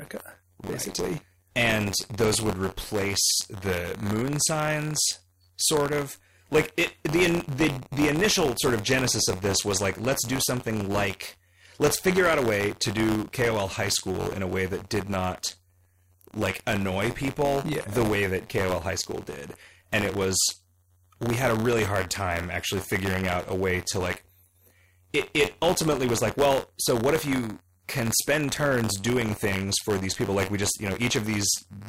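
Speech, with buffer tearing running through the whole recording: a steady robotic rattle at about 93.8 Hz, which fits a 512-sample buffer being overrun by its reader. In each period a small slice of sound from roughly 30 ms earlier replaces the current audio, bounded by hard joins. Unlike mains hum or a tonal buzz, the rattle vanishes in the pauses between phrases. It exists only where there is signal to tear.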